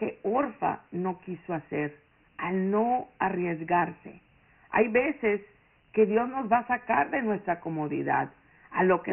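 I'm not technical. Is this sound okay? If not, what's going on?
No. Dialogic VOX ADPCM runs throughout: a coarse phone-system compression that cuts everything above 3.3 kHz, leaving the speech muffled with a gritty hiss trailing it.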